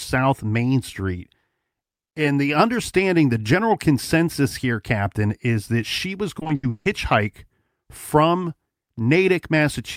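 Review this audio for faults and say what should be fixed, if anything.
Between 6.39 and 6.87 s, packets went missing or arrived too late again and again. This is repeated packet loss, which makes the speech sound robotic. Each hole was bridged by stretching the last good sound forward, and about 300 ms of the half-second span was filled this way. The longest single gap was 160 ms. The result is choppy speech with fragments dropped. Prevent it with a larger jitter buffer and forward error correction on unreliable network links.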